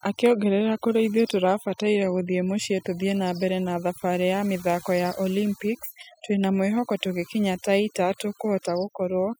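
A speech recording carries overdone noise removal from start to finish: the noise reduction was set too aggressively, pulling individual frequency bands down whenever they sat near its noise estimate. Between phrases the background collapses into near silence flecked with twinkling specks.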